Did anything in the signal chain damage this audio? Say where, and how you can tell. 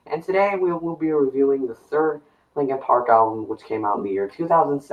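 Yes. At the call-processing stage, a noise suppressor applied to music or sounds stays engaged throughout, with gain swinging by about 10 dB. Held sound and decays get treated as noise. On a spectrogram, sustained bands flicker and tails darken early. The waveform envelope pumps between attacks.

Sound cut by the noise suppressor occurs at 0.02–0.29 s, 1.7–1.93 s and 2.14–2.57 s, dipping about 12, 11 and 12 dB. The suppressor judged these stretches noise-like and pulled them down harder. This shows as sudden hollows in the waveform and dimmed patches across the spectrogram.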